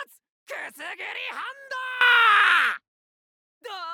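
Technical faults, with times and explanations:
2.01–3.27 s, sudden gain jump: at 2.01 s the level steps up by about 16 dB from one sample to the next. The background noise rises by the same amount as the sound, so the whole signal, noise floor included, gets louder at once. It stays at that level until 3.27 s, then drops back. The likely cause is a digital gain change applied without a ramp, leaving nothing to smooth either transition.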